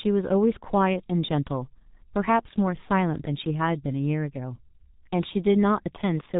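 From start to finish, the speech carries heavy G.723.1 codec damage. Nothing above about 3.8 kHz survives, so the sound is muffled and dull. The codec builds each 30 ms frame from a crude model of the voice. That model changes slowly, so fast consonants smear into their neighbours. Voiced sounds turn hoarse and buzzy. The thin, coarse texture fits a bitrate near 6.3 kbit/s.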